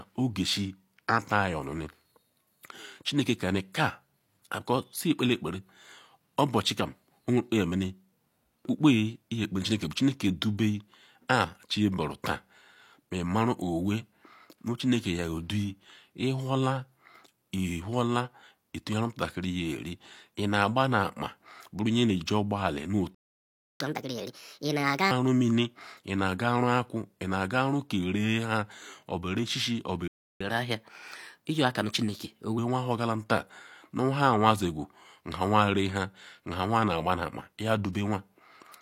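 Speech, interrupted twice by a playback stall followed by catch-up at higher speed. The sound cuts to silence from 23.14 to 23.80 s (about 0.65 s) and from 30.08 to 30.41 s (about 0.33 s), likely because the player's buffer ran dry or its thread was blocked. After each stall the player races through its backlog. From 23.80 to 25.11 s it runs at 1.5 times speed, with pitch roughly seven semitones high. From 30.41 to 32.58 s it runs at 1.15 times speed, about two semitones up. Because speed and pitch rise together and then return to normal, this is resampled catch-up rather than a fixed pitch-shift fault.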